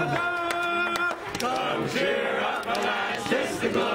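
No technical faults can be heard anywhere in the clip.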